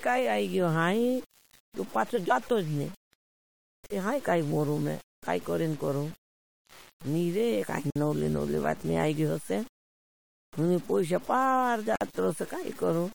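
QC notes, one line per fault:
Throughout: low bit depth without dither. The speech carries a grainy, gritty distortion that moves with the voice, sitting roughly 20 dB below the signal. Quiet passages break up and sputter as the samples jump between a few coarse steps. The error tracks the waveform instead of forming a steady hiss, so it roughens every syllable. This is likely a reduction to about 6 bits by plain truncation, with no dither to smooth the steps into noise.
3.86 to 3.90 s, 7.90 to 7.96 s, 11.96 to 12.01 s: gap at a join of encoded pieces. Three short silences cut into continuous speech, one every 4 s. They last 41 ms, 53 ms and 53 ms. The first falls just before "तेहाँ काई मोरूं मैं", the second just after "निरे काई", and the third just after "हुणी पोईश पार". Each has smeared edges, and the speech resumes where it stopped. Separately encoded pieces were joined untrimmed, leaving each run's start-up delay and final-frame padding in place.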